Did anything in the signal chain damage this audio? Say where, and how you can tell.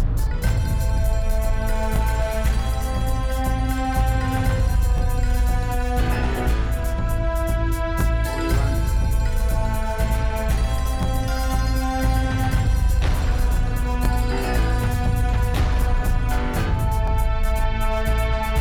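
Yes, overlapping chunks at the buffering stage: each 3 s chunk restarts 23 ms early, so audio repeats at 1.96, 4.98, 8.01, 11.03, 14.05 and 17.08 s, showing as regularly spaced vertical click lines on a spectrogram.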